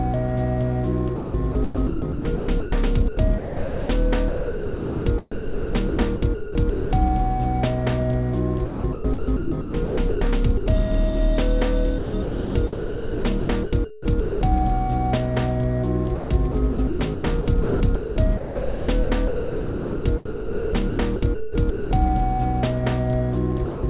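From 1.16 to 7.26 s the sound keeps cutting in and out, with about 3.1 s of it swapped for a hiss-like fill. The same thing happens at 8.66 to 10.66 s (about 1 s lost), 11.98 to 14.41 s (about 1.6 s) and 16.15 to 21.91 s (about 3.3 s). That's most likely sound chopped by the voice detector. The sender's detector kept flipping between sending and pausing, so quieter bits got replaced with comfort noise.

Right at the end, from 23.65 to 23.83 s, there's a different problem: about 180 ms of sound just disappears under steady noise. This is likely sound dropped by the voice detector. The detector mistook that tail for background and stopped sending, so the receiver filled the gap with comfort noise. All of this came through a G.711 A-law call path at 64 kbps, which is why nothing reaches above 4 kHz.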